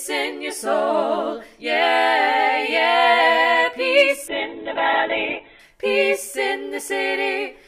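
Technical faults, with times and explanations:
4.28–5.71 s, call bitrate drop: the encoder's bit budget suddenly shrank, and the coarse, watery texture fits a fall from 128 kbps to roughly 8 kbps. The audio band narrows from 20 kHz to 4 kHz for about 1.3 s. On a spectrogram, everything above 4 kHz goes abruptly blank, then returns.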